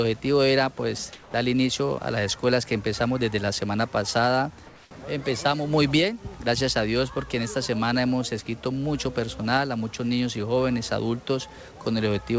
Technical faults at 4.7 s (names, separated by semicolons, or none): comfort noise in place of the background